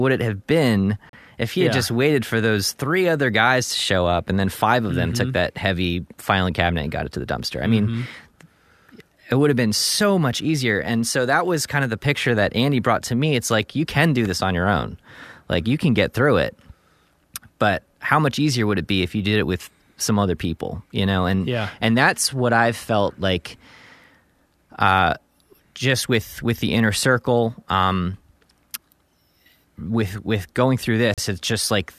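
Speech, interrupted by a gap between stream segments at 1.09 to 1.13 s (about 38 ms), at 7.12 s (a brief 8 ms hole), and at 31.14 to 31.18 s (about 38 ms). These fall on 6-second segment boundaries, where mismatched time stamps leave space the player fills with silence; nothing is lost, the sound is just pushed later. A waveform shows a flat line with abrupt edges, and a spectrogram shows a narrow, empty vertical stripe across all frequencies.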